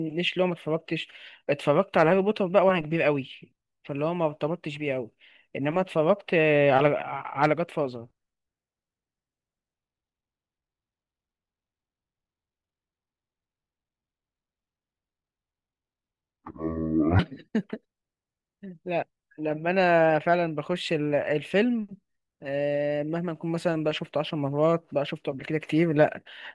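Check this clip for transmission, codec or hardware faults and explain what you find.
One fault stands out. From 9.75 to 17.19 s the speech drops a full octave and drags at half speed, sounding deep and sluggish. This is a wrong sample rate: the samples are played at half their intended rate without conversion, consistent with 48 kHz audio played back at 24 kHz.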